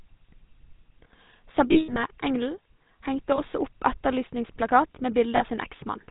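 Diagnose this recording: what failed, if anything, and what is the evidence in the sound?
The speech runs through the GSM full-rate codec at 13 kbit/s, a codec-stage fault present for the whole clip, and the damage is plainly audible: a buzzy, gravelly roughness on every voiced sound. The codec models the vocal tract and excites it with a thinned, regularly spaced pulse train, so fine detail is lost and nothing passes above 4 kHz. On a spectrogram the energy stops at a hard 4 kHz ceiling, with coarse, grainy harmonics below it.

Lost GSM frames, a network-stage fault, cause three breaks. From 1.72 to 2.0 s about 180 ms is missing, scattered over 240 ms, with the longest run around a tenth of a second. A single 20 ms frame drops at 3.36 s, and 40 ms goes at 5.36 to 5.44 s, just after "opp etterlysningsplakat". Concealment repeats the last good frame's parameters, so each gap rings metallically. 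A spectrogram shows frozen, smeared formant bands.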